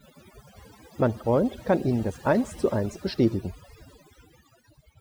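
Throughout the speech, overdone noise removal mutes frequency bands near the noise estimate, leaving twinkling specks in near silence, unlike a gate's whole-signal cutoffs.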